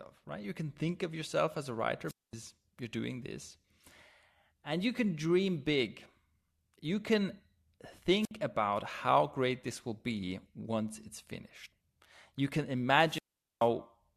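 Wireless microphone squelch dropouts occur from 2.07 to 2.33 s and from 8.21 to 8.31 s. In each, the radio link from the analogue FM microphone weakens until the receiver's squelch shuts the output off. A short surge of hiss gives way to near silence lasting about 220 ms in the first case and about 60 ms in the second. The speech then comes back.

Damaged data in a compressed stream appears at 11.71 s as a brief glitch. Corrupted bytes there leave the decoder unable to read the affected frame, so it loses sync and skips ahead to the next valid frame header.

A third squelch dropout, the longest, runs from 13.04 to 13.69 s. The hiss rises, the output stays muted for about 430 ms, and the speech returns only near the end of the clip.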